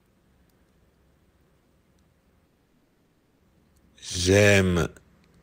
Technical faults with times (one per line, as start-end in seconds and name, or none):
2.47-3.43 call audio freeze